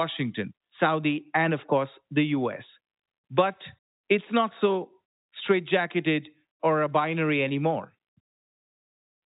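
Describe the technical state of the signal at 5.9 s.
At 5.9 s the speech is intact, carried through G.711 telephone coding with its usual band limit, nothing above 3.8 kHz, and no fault at that moment.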